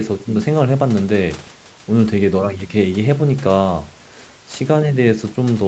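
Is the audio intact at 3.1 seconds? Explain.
Yes, the speech at 3.1 seconds is intact, with no dropout, glitch or other fault at that moment; the call path's normal band limit, with nothing above 8 kHz, shapes it there.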